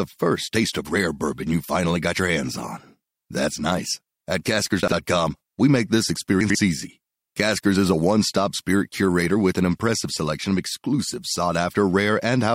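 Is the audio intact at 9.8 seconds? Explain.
Yes, the speech at 9.8 seconds is intact, with no audible fault at that moment.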